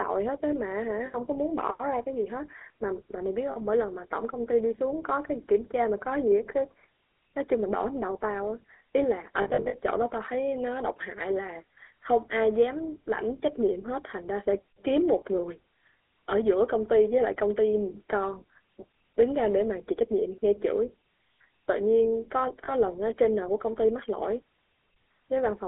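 The whole recording carries the sound of the GSM full-rate codec. The band runs from 300 Hz to 3.6 kHz. Speech has a buzzy, gravelly edge, which fits 13 kbps GSM full rate. The codec models the vocal tract and drives it with a coarse pulse train. Much of the fine excitation detail is thrown away. That loss gives the rasp, and it is plainly audible.

Lost GSM frames break in four times. At 1.06 s there is a gap of 80 ms, and at 3.52 s another of 40 ms. From 9.42 to 9.78 s, 220 ms go missing, scattered across about a third of a second. The longest run there is under a tenth of a second. At 22.64 s a last 40 ms drops out. Each time the decoder repeats the last good frame. The sound freezes into a brief, rough, metallic ring.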